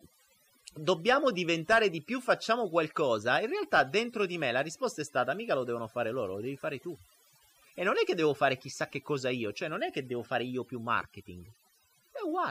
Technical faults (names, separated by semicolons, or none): overdone noise removal